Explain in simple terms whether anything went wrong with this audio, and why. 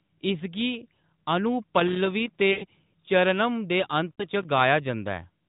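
Two things went wrong. Loose connector crackle shows up twice, from 1.75 to 2.41 s and from 4.36 to 4.61 s. A worn or dirty contact keeps cutting in and out, which sounds like scratchy crackling.

There are also lost AMR speech frames at 2.52 to 2.65 s and 4.16 to 4.24 s. Radio errors spoiled bits of the phone signal. The decoder filled each gap by stretching the last sound and fading it out. The first gap lasts about a tenth of a second, and the second is shorter. The phone-style narrowband sound of the call itself is expected for this kind of mobile line.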